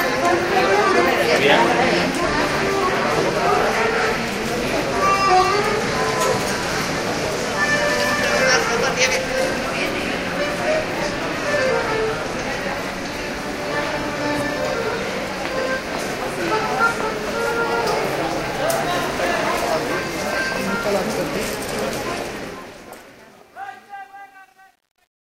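From 22.04 s the closing fade-out, which begins smoothly, grows gritty, and from 23.01 s to the end at 25.26 s it is at its worst. This is truncation distortion on a fade: without dither, the waveform collapses into coarse steps, consistent with about 11-bit resolution.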